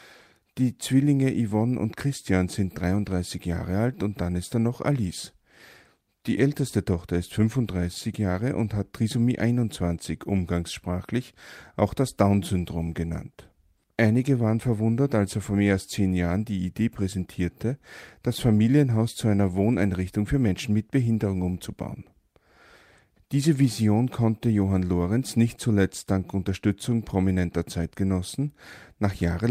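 No technical faults can be heard anywhere in the recording. Nothing in the speech calls for a timestamp or a fix.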